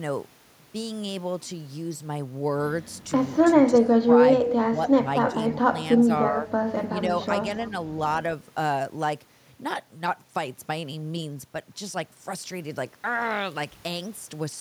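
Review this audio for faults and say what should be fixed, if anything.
Speech suppressed in double talk occurs at 3.70–4.19 s, 4.43–5.06 s, 5.30–5.35 s, 5.61–5.67 s, 6.32–6.49 s and 6.89–6.96 s. The speech dips by roughly 5 to 20 dB, deepest near 3.7 s. The likely cause is that the echo canceller could not tell the local talker from loudspeaker echo while both sides talked, so it turned everything down. A canceller with better double-talk detection, or a headset in place of the loudspeaker, would prevent this.

Echo leak appears at 4.44–4.53 s and 5.49–5.55 s as brief delayed copies arriving 301 and 302 ms late, roughly 10 and 20 dB below the speech. The likely cause is loudspeaker sound that the canceller failed to remove, which the microphone picked up and sent back. Better canceller adaptation, lower loudspeaker volume or headphones would stop it.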